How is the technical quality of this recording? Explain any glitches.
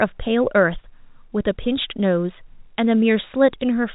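No glitches to report; the speech carries the narrow, sub-4 kHz bandwidth of G.711 telephone coding, with only that format's faint level-tracking quantisation hiss beneath it.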